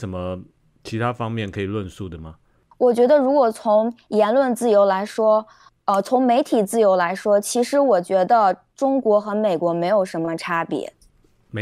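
No dropouts, distortion, glitches or other transmission faults can be heard anywhere in the recording.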